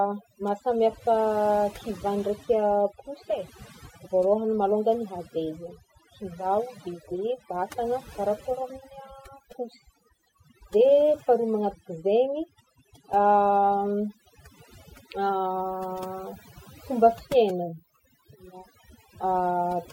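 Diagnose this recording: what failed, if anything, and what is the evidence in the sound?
A noise suppressor in the call processing stage was set far too aggressively on noisy speech. Throughout the clip it cuts whole frequency bands whenever they drop near its noise estimate. This is overdone noise removal: the background drops and breaks up into twinkling specks.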